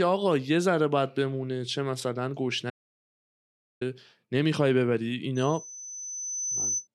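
At 2.70 s the speech cuts out into an audio dropout to silence lasting 1.11 s, until 3.81 s, with no room tone at all, likely from a lost input while recording continued. The waveform shows a flat zero line and the spectrogram a fully blank column.

From 5.35 s to 6.88 s a loudspeaker feedback squeal rises at 6 kHz, as the microphone re-amplifies its own loudspeaker output. It swells over about a second and a half to roughly the level of the speech, drawn as a single bright horizontal line on the spectrogram.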